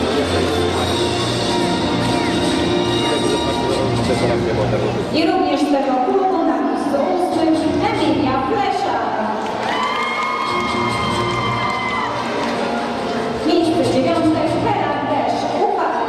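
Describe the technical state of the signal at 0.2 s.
At 0.2 s the signal is intact, with no audible technical fault at that moment.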